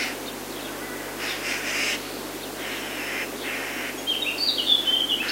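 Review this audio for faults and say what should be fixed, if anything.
There's a mains buzz running the whole way through, a raspy 50 Hz hum with harmonics climbing into the kilohertz range, sitting roughly 20 dB under the sound. Sharp switching spikes from a dimmer, rectifier or unshielded line are getting coupled in twice per cycle. Keep cables shielded and away from dimmers and power supplies, or power the recorder from a clean supply.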